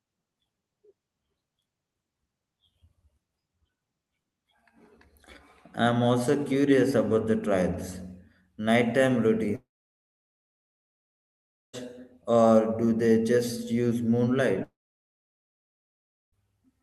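At 9.55 s the speech breaks off and does not return until 11.75 s, and at 14.63 s it breaks again until 16.34 s. Each gap is a long network dropout, likely lost packets on the call link. The receiver stretches the last sound into a brief fading buzz for under a tenth of a second, then leaves roughly two seconds and then over a second and a half of silence. On the waveform these show as flat stretches, and on a spectrogram as blank columns cutting across the band-limited Opus content that stops near 12 kHz.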